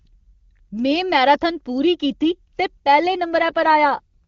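Up to 3.38 s the speech has the clear wideband HD Voice sound, but from there to the end there's an AMR rate drop. The bandwidth and flow stay intact, yet the voice turns rough and synthetic, which points to the codec falling from about 23.85 to 8.85 kbit/s.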